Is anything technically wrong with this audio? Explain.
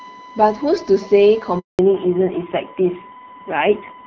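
Yes, three faults. Throughout, there is USB whine: current drawn by the USB bus in 1 ms frames leaks into the audio through the power or ground path. The result is a steady, fixed-pitch tone at 1 kHz, sitting roughly 20 dB below the speech and audible under every part of the clip.

From 1.59 s to 1.79 s there is a handover gap. The call switched networks and no speech frames arrived for 200 ms. The sound fades out almost immediately and stays silent until the new link carries audio again, so whatever was said there is gone.

From 1.79 s to the end there is a fallback to narrowband. After the handover, the call dropped from HD Voice, where the wideband codec at 12.65 kbit/s kept the speech clear, to an older narrowband codec. The sound points to a low rate, around 5.9 kbit/s. Nothing above 4 kHz survives, so the speech turns dull and muffled, with added roughness.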